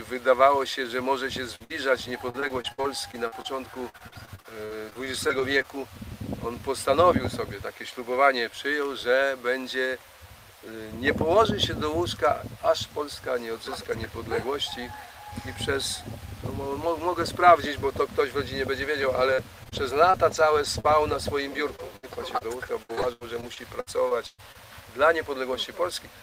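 Repeated packet loss (robotic sound) affects two stretches, 1.55 to 5.66 s and 18.82 to 24.56 s. Short gaps, up to 60 ms and then up to 115 ms, are bridged by extending the preceding sound, giving choppy audio with missing fragments.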